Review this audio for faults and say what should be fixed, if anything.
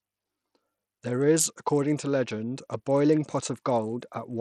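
Throughout the speech, the treble flickers and drops out under a gritty haze, likely from Bluetooth SBC compression at a starved bit pool, which fits roughly 80 kbps. The upper sub-bands lose their bits while the rest is coarsely quantised. A spectrogram shows patchy, blocky gaps above a few kHz. Fix it by recording over a wired path or a higher-quality Bluetooth codec.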